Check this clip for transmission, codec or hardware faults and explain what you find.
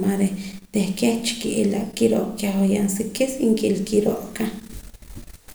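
Nothing faulty can be heard anywhere in the speech.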